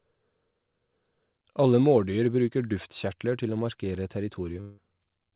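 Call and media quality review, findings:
Long network dropout, 4.61–4.79 s, right after "duftkjertler til å markere". The speech gives way to a fading buzz or hiss for about 0.17 s without reaching silence. About 0.16 s of audio was likely lost in transit, and concealment stretched the last sound until packets resumed. The band is narrow throughout, with nothing above 4 kHz, consistent with a G.711 call path.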